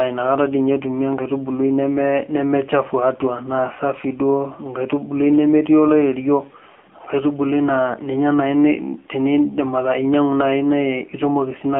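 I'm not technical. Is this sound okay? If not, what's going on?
No. AMR narrowband mobile codec, throughout: the speech is squeezed into a thin phone-line band of roughly 200 Hz to 3.5 kHz and rebuilt from a rough voice model, so it sounds muffled, buzzy and synthetic.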